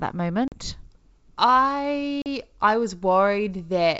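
A speech clip with packet loss on an ADPCM call. Hard-edged gaps fall at 0.48–0.55 s and 2.22–2.27 s. Each loses about 40 ms, likely a couple of packets. Silence fills each hole, and the decoder's predictor and step size drift from the sender's before resettling.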